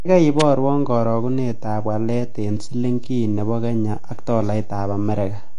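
A short speech recording carries a DC offset for its whole length: the waveform sits shifted off the zero line by a constant amount. It isn't heard as such, but it eats into headroom, and a spectrogram shows a steady band of energy pinned at the very bottom. The audio also sounds dull and smeared with a warbling, fizzy edge on sibilants, plainly audible damage of the kind that AAC compression likely leaves at a low bitrate; the texture fits AAC-LC around 32 kbps. On a spectrogram everything stops sharply at 10.2 kHz. At 0.40 s, just before "karagunetap walet", a sharp snap sits on top of the sound, a tight burst lasting about 13 ms that is likely an electrical switching spike picked up from a nearby arc. The waveform shows it as a thin vertical spike, and the spectrogram shows a narrow broadband stripe.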